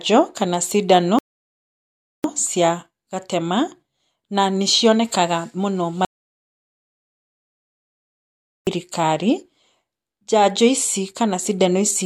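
At 1.19 s the player ran out of downloaded audio and halted until more data arrived, a rebuffering stall. The speech cuts to silence until 2.24 s, then picks up exactly where it stopped. Nothing is missing, but about 1.06 s of dead air is added.

From 6.05 s to 8.67 s there is an audio dropout to silence, likely from the input being lost while the recording carried on writing zeros. The speech breaks off mid-flow into total silence with no room tone, and about 2.62 s of speech is gone.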